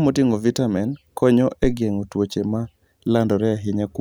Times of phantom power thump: 1.64-1.79

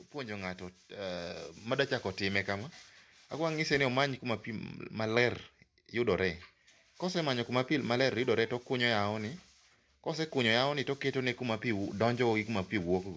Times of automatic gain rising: 0.12-4.77

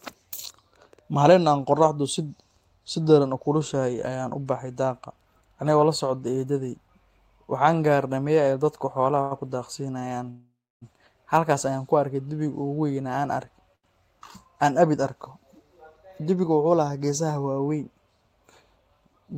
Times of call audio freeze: 10.30-10.83

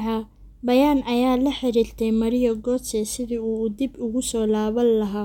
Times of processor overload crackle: none

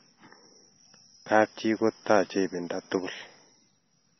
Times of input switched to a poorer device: none

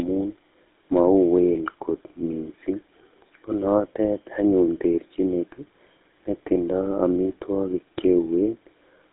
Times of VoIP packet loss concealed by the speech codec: none

